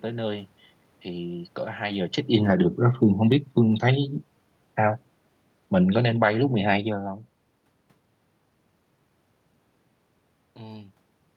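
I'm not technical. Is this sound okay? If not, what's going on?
No. Automatic gain falling happens twice, from 1.85 to 2.65 s and from 5.79 to 7.16 s. The level control judged the input too loud or its background noise too strong and turned it down gradually, so the speech and the room noise behind it sink together.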